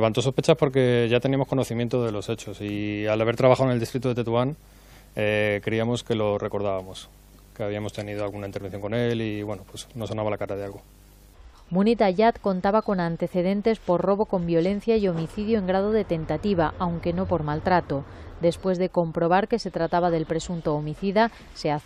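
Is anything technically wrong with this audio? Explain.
No, nothing is technically wrong with this audio.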